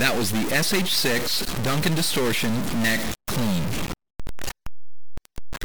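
From start to finish the audio carries a harsh, buzzy distortion, and the quiet gaps are filled with a steady hiss of noise instead of silence. The likely cause is a stuck bit: one bit of each sample is held at a fixed value, so roughly half the samples jump by that bit's weight, a step of about -20 dBFS, in a pattern that follows the waveform. Because that bit also flips with the sign of small values, the pauses turn noisy.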